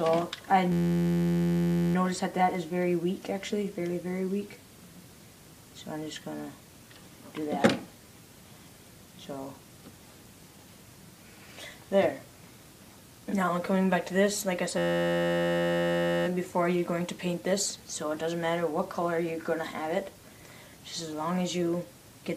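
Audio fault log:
0.72–1.95 s and 14.78–16.27 s: system hang loop. Both times the machine stalls while the sound hardware keeps replaying one 11.61 ms slice, over a hundred repeats each, which fits a 512-sample buffer. That tight cycle comes across as a steady 86.1 Hz buzz.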